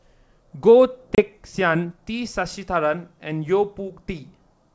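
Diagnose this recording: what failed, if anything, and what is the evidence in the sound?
The network dropped audio on this G.722 call, causing packet loss on an ADPCM call: a hard-edged 30 ms silent hole at 1.15 s, consistent with a few lost packets. The G.722 decoder's predictor and step size then disagree with the sender's, so the speech comes back with some distortion, settling by about 1.23 s.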